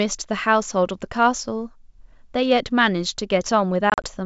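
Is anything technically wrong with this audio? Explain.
Yes. There is packet loss on an ADPCM call between 3.90 and 4.07 s. About 80 ms of audio drops out in hard-edged silent gaps spread over 140 ms. The longest single gap is 40 ms, and around four packets were lost. The decoder's adaptive predictor and step size lose track of the sender's. So after each gap the speech resumes slightly distorted until it resynchronises. This sits on wideband G.722 audio.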